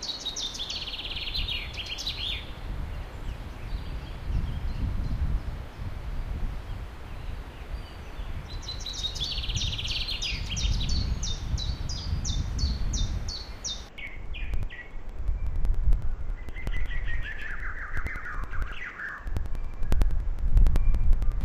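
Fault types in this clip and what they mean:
Interleaved audio read as planar: the playback path took blocks of alternating left and right samples and split each one down the middle, treating the first half as left and the second as right. Each half then plays at half speed alongside the other, so from 13.89 s to the end the sound drops an octave, doubles and turns choppy. It chops about 10.8 times per second, roughly every 92.9 ms, which fits a 4096-sample block.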